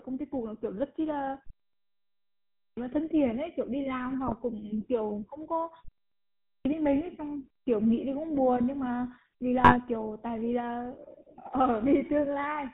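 Speech heard through the GSM full-rate codec for the whole 13 seconds, with damage that is plainly audible: nothing comes through above 4 kHz, and a buzzy, gravelly roughness sits on every syllable. That roughness comes from the codec rebuilding the excitation from regularly spaced pulses that keep only every third sample, which fits the 13 kbps full-rate scheme. A plain 4 kHz low-pass would sound muffled but smooth, so the grit is what gives this codec away.

There are two clipped starts after a pause. At 2.14 s, after about 0.77 s of silence, speech bursts in with roughly 0.63 s of its opening missing, and the full sound returns at 2.77 s. At 6.08 s, after a 0.33 s gap, about 0.57 s is swallowed up to 6.65 s. The output path is dozing through the silence and waking too late.

GSM bit errors hit at 4.27 to 4.33 s and again at 9.60 to 9.76 s. Each burst breaks into a brief squawk and gargle, which fits corrupted filter, pitch and gain values in about three 20 ms frames. 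Those distorted bursts set them apart from a packet dropout, which would leave a gap or a smooth concealment fill.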